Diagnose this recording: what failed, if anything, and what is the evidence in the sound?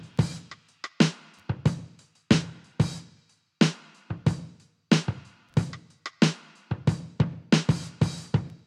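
Nothing failed here: listening closely, there's nothing in the sound that points to trouble at any stage of the chain.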